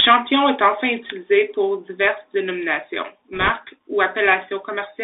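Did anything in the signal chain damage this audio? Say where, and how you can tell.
Yes. The Bluetooth CVSD headset codec colours the whole clip. Nothing survives outside roughly 300 Hz to 3.7 kHz, and the damage is plainly audible: a granular hiss sits under the speech, s sounds turn scratchy, and loud bright passages smear. That happens at the codec stage. At the 64 kbps rate, the one-bit up/down coder with its adaptive step can't keep pace with fast, loud high-frequency movement.

Microphone overload appears from 0.00 to 0.35 s. The loudest peaks have a harsh, crackly edge, with the tops flattened by about 5 dB over full scale, affecting a small fraction of samples. This is a converter-stage fault. The input gain was likely set too high, so the waveform hit the analogue-to-digital limit and was squared off instead of captured.

Microphone volume stepped down occurs twice, at 0.12 s and again at 1.11 s. 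Each time, speech and background together fall by about 3 dB in one abrupt step. That points to call processing rather than the talker: automatic gain control likely reacted to the overload by lowering the device's input volume in discrete steps.

Bit errors on a Bluetooth voice link hit from 3.33 to 3.50 s. A rushing, crackly noise rides over the speech there, but with no sharp clicks. It consistent with an error rate of around one percent on the wireless link. In CVSD each bit only nudges the signal slightly and the error decays away, so corruption shows up as diffuse noise, not loud pops.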